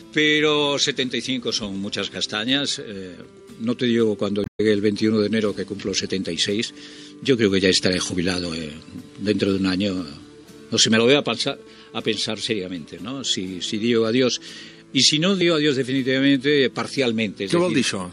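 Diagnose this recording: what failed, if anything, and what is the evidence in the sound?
A brief glitch cuts through the audio from 4.43 to 4.60 s, lasting about 0.17 s. This is damaged data in a compressed stream at the codec stage: corrupted bytes made the decoder misread those frames and lose sync until it found a valid frame header again.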